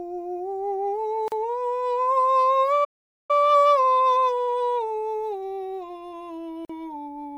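At 1.28 s the music drops out for about 39 ms, a gap at a join of encoded pieces: encoder start delay and end padding left untrimmed, with smeared edges. The music then stops dead at 2.84 s for about 446 ms before resuming where it left off, most likely a playback stall from the player running dry. From 3.31 to 6.31 s there's time-compressed catch-up, playing 1.1 times faster at normal pitch as small slices get cut and cross-faded. Another join gap opens at 6.65 s, about 45 ms this time.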